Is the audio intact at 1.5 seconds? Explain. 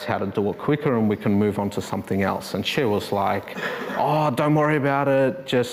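Yes, at 1.5 seconds the audio is intact, with no dropout, click, distortion or other fault audible at that moment.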